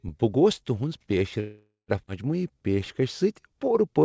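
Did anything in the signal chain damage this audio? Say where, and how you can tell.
Yes, three things went wrong, all in the network and jitter-buffer stage of the call path, which is a G.722 link with nothing above 8 kHz.

From 1.40 to 1.90 s there's a call audio freeze: the last sound smears into a fading buzz, with about 0.12 s of dead silence, before carrying on where it left off. That's likely packets stalling in transit and the jitter buffer running dry, so about 0.48 s was inserted and nothing lost.

Right after, at 2.06 to 2.09 s, comes a skip ahead: playback jumps forward with only a tiny join, and roughly 0.4 s of speech just isn't there. Audio was dropped, in transit or by an overflowing buffer, while later audio was already queued, pulling the delay back down after the freeze.

From 2.42 s to 4.04 s you get a jitter buffer slow-down. Speech runs at about 90% speed with the same pitch, sounds drawn out, because the buffer repeated pitch periods to rebuild its reserve, adding about 0.16 s.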